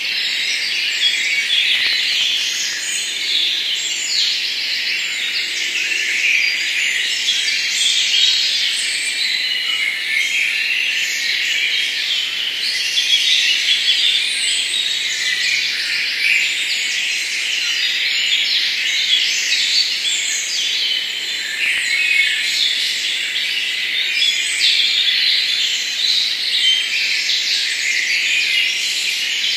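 Processor overload crackle breaks up this everyday-sound recording from 1.75 to 2.89 s and again, briefly, from 21.57 to 21.78 s. The processor missed its deadlines on very short buffers of around a millisecond and a half, dozens in the first burst and a handful in the second. Each missed buffer was skipped, leaving a hard-edged gap, so the sound tears into gritty crackle until the load passes.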